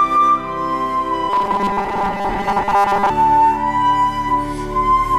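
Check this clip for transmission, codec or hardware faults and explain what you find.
One fault is present: robotic sound from repeated short buffers, running from 1.30 s to 3.10 s. Across that span the sound becomes a rigid, metallic buzz fixed at 200 Hz while still roughly tracking the original contour. A 200 Hz buzz corresponds to a 5 ms segment being replayed. The likely cause is audio arriving too slowly, with the playback side looping the most recent 5 ms to fill the gaps, so that most of the real audio in this stretch is skipped.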